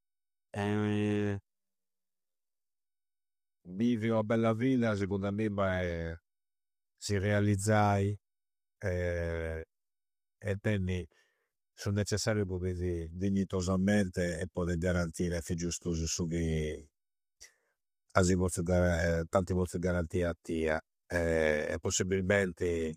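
Throughout, the speech sounds rough and grainy, with noise between the harmonics. This is likely low-delay AAC compression. It was coded at a bitrate near 32 kbps.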